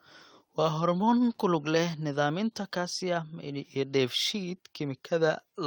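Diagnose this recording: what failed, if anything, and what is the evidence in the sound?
Nothing failed in this recording, and the speech carries no audible evidence of a fault at any stage.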